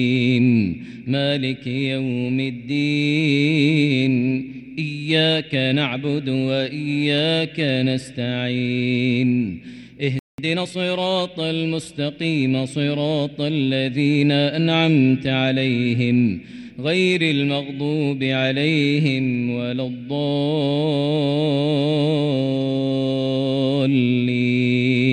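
At 10.19 s the audio cuts out abruptly and stays silent until 10.38 s, a gap of about 0.19 s. This playback stall was likely the player running dry or its thread being blocked. A waveform shows a flat line, and a spectrogram shows a blank vertical band with hard edges.

From 10.38 s to 10.76 s the sound runs hurried, at 1.5 times normal speed but unchanged in pitch. This is time-compressed catch-up: the player trims and cross-fades small slices to clear the backlog. A spectrogram shows events squeezed closer together, with harmonics holding their frequency.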